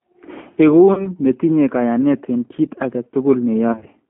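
The whole call passed through a G.729 codec, which fits an 8 kbit/s line. The codec rebuilds speech from a filter, a pitch predictor and a few pulses per frame, and the band runs only from 200 Hz to 3.5 kHz. The speech is narrow, rough and plainly synthetic.

From 0.94 to 1.09 s, VoIP packet loss concealed by the speech codec sets in. The decoder stretches its last frames into a fading buzzy tone or coloured noise, which fits a gap of about 30 ms, and the voice stays thin as it recovers. From 3.72 to 3.89 s, the losses are scattered over about 140 ms, with no single gap longer than 30 ms, and they produce repeated buzzy or noisy smears.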